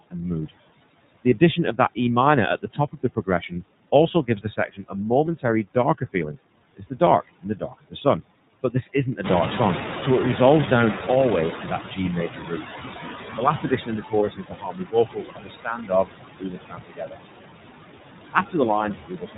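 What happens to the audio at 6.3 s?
At 6.3 s the noise suppressor is mistaking parts of the speech for background noise. Within the span from 2.62 to 9.19 s, soft consonants and word endings are pulled down by up to about 20 dB and sound swallowed or faint.

The suppressor is also doing its usual job on the background, cutting steady noise by about 20 dB frame by frame. The leftover noise dips between syllables and swells under them.

On top of that, the iLBC codec encodes each 30 ms frame independently and passes nothing above 4 kHz. The result sounds muffled, slightly rough and synthetic.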